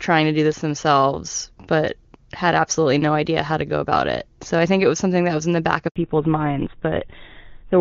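Handover gap at 5.88 to 5.96 s in this speech clip: for 80 ms no speech frames arrive while the call switches networks, so the sound cuts to silence and that stretch is lost. Fallback to narrowband follows from 5.96 s to the end. Everything above 4 kHz disappears, leaving duller, rougher speech that points to a drop from the wideband AMR-WB (HD Voice) codec, heard with faint or no coding damage before the switch, to an older narrowband codec such as GSM full rate.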